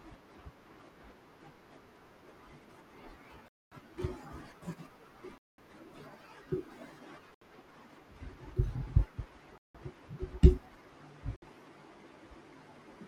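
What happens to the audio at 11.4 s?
At 11.36 to 11.42 s the speech drops to a clean 60 ms silence, likely a Bluetooth stall, where interference delayed packets until the headphones' buffer emptied. Unlike a crackly dropout or smeared concealment, the gap is true silence before playback resumes.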